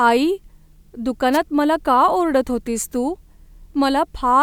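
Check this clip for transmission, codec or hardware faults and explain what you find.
One transmission fault: from 1.32 to 1.38 s, a wireless microphone noise hit. The FM radio link faded as reflections cancelled, so receiver noise surged into a brief swish of static over the speech.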